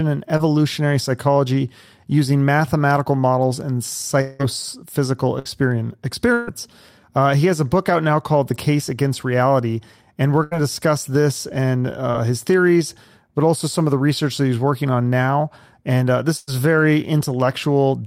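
At 0.37 to 0.41 s, a short concealed packet loss: about 20 ms of the speech did not reach the decoder in time, so the receiver extended the preceding sound and blended back into the real signal. It passes as a brief smear or wobble, and a short consonant at that point can drop out. The same thing happens at 12.11 to 12.15 s, where a similar 20 ms hole is bridged the same way.

From 4.21 to 4.41 s the sound is replaced by about 180 ms of synthetic continuation. The likely cause is a long network dropout, during which nothing arrived from the sender. The last sound is stretched into a fading buzz or hiss that fills the entire gap without falling to silence, and the speech picks up further along with that stretch missing.

Bursts of packet loss follow at 5.39 to 5.47 s, 6.33 to 6.49 s, 10.43 to 10.53 s and 16.37 to 16.49 s. In each, several consecutive packets were lost or arrived too late, removing about 60, 140, 80 and 100 ms respectively. 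The receiver held the last sound and lowered it over the gap, producing a sustained buzz on voiced sounds or a decaying hiss otherwise. The longer bursts at 6.33 and 16.37 s stay concealed right through, with no silent stretch, before the speech resumes past the lost portion.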